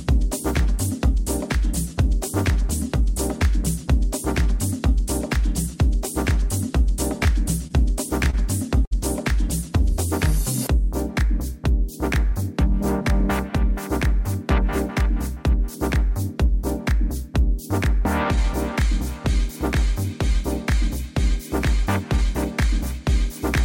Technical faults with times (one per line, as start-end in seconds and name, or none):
7.67-7.72 short stall from a late packet
8.30-8.35 short stall from a late packet
8.85-8.93 short stall from a late packet